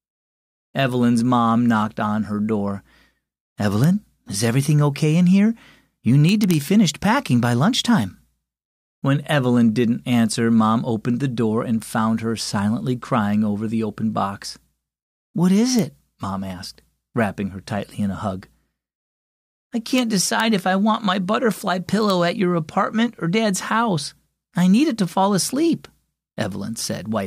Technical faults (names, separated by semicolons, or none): integer overflow